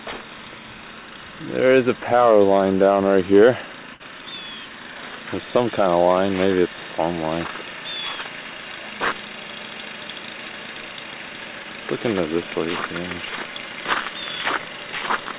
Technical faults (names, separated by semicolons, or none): burst of packet loss; short concealed packet loss